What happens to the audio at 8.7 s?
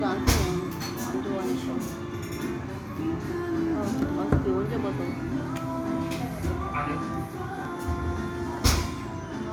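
Nothing goes wrong at 8.7 s; the audio there plays through intact, with no dropout, click, distortion or other fault to be heard at that moment.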